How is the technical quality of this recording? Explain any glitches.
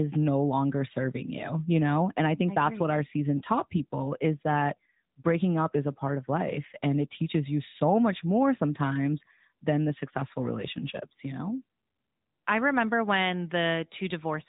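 The quality is held back by one fault that runs through the whole clip: AMR narrowband mobile codec damage, plainly audible. Nothing passes above about 3.8 kHz, and the codec's vocal-tract model with pulse excitation leaves speech buzzy and synthetic, which fits a mid-rate mode around 10 kbps.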